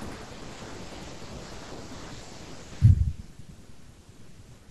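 No technical faults can be heard anywhere in the speech. At no point does the audio give a listener anything to flag on technical grounds.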